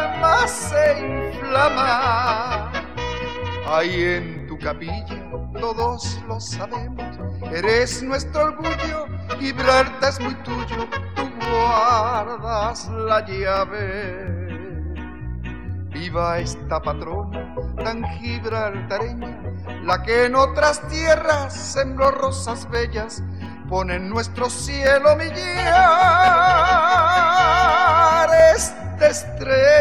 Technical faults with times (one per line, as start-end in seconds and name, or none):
0.15-29.81 clock drift buffer slips